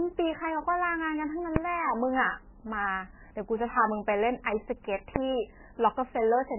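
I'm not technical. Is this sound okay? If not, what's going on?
No. The speech sounds dull and watery throughout, with nothing above 3 kHz. The swirling, unlike plain muffling, points to heavy MP3 compression as the likely cause.

At 1.56 s and 5.16 s there are single sharp bangs: invalid numbers at full scale. A calculation broke and briefly forced maximum loudness, too quick to leave a gap.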